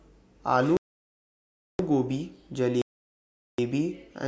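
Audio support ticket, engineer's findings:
Block of digital silence, twice: 0.77 to 1.79 s, a 1.02 s hole, then 2.82 to 3.58 s, 0.77 s. Hard cut to silence, no fade. Likely output buffer not filled in time. First dropped block fits 16384 samples.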